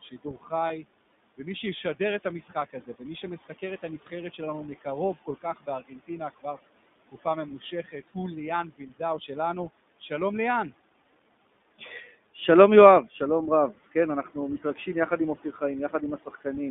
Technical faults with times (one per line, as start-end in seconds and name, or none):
0.00-16.70 noise suppressor artifacts
0.00-16.70 iLBC codec
0.02-0.52 speech cut by the noise suppressor
0.68-0.71 lost iLBC frames
2.24-8.15 speech cut by the noise suppressor
8.71-9.30 speech cut by the noise suppressor
11.78-12.37 speech cut by the noise suppressor
13.73-16.46 speech cut by the noise suppressor